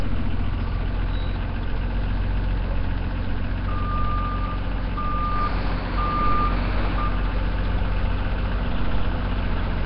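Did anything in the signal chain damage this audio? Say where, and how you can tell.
Yes, at the codec stage, throughout: the sound carries a rough, hissy halo and a smeared, underwater blur, with nothing above 5.3 kHz. This is likely Nellymoser compression at a bitrate near 22 kbps. On a spectrogram, starved bands show as flat noise fill under a hard ceiling.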